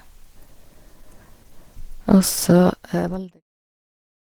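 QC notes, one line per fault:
Throughout: Opus compression. The speech has a plainly audible hoarse, muffled quality with grainy, rough texture on sustained sounds rather than swirling. This is likely a low-rate Opus encode in hybrid mode, where a speech-style coder handles the low band and the music-style coder fills the upper bands with folded or noise-like energy. The sound fits a bitrate around 16 kbps. Content still extends to about 20.2 kHz, and the deliberate fade-out ending at 3.44 s carries the same texture.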